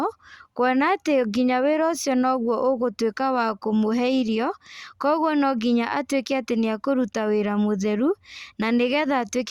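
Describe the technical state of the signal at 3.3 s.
At 3.3 s the speech signal is intact, with no audible fault at that moment.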